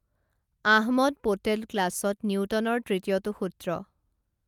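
No technical faults are audible.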